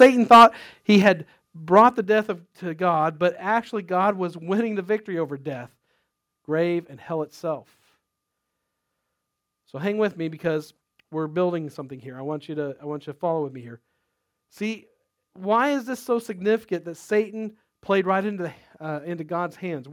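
From 0.01 to 0.46 s the speech shows microphone overload. Peaks run about 8 dB past the converter's limit, and roughly a tenth of the samples are flattened. The likely cause is input gain set too high for the converter, which gives the loudest syllables a harsh, crackling edge. A microphone volume step-down follows at 0.03 s, lowering voice and background together by about 3 dB, likely an automatic correction by the call software. A second, deeper step of about 7 dB at 1.02 s likely comes from the same mechanism and produces an abrupt drop in level. Overload returns from 1.76 to 1.81 s, just before "the death of to". It is about 1 dB over, with only a few percent of samples clipped, and the likely cause is again excess input gain. A third volume step-down of about 5 dB at 2.04 s, just before "death of to", likely comes from the software reacting to that peak.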